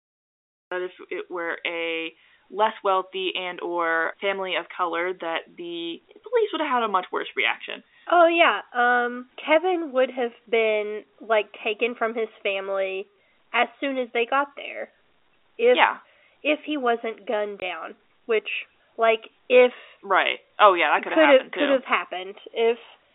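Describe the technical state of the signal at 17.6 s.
Right after "if he wasn't gunned" there's a packet loss filled with silence, from 17.60 to 17.62 s. A 20 ms chunk, which fits a single dropped packet, went missing and the receiver played a dead gap instead, so the sound just cuts out with hard edges, all over the telephone band of this G.711 line.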